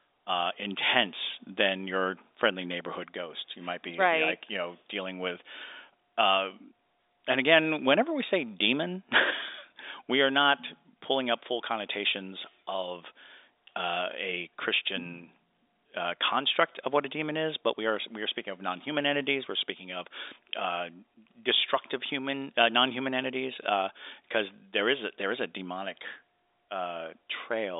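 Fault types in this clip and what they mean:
No faults can be heard in this speech recording.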